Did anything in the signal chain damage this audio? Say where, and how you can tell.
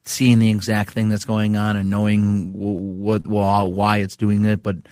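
Yes. Repeated stalls (stutter) from 2.53 to 3.87 s point to the network and jitter buffer. The speech repeatedly catches and holds, up to 38 ms, for 17% of that stretch. Late packets let the buffer run dry, so the last sound was continued. Nothing is lost, but it drags.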